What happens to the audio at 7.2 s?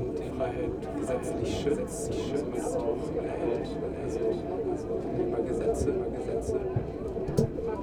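At 7.2 s the audio is heard twice: every sound is followed by a clean, full-band repeat roughly 0.7 s later, a few dB quieter than the original, with no reverb tail or room colouring, so it reads as a second copy rather than an echo. This doubled audio track runs through the whole clip, not just this moment. The likely cause is the same signal being captured again through a slower path and mixed in alongside the original.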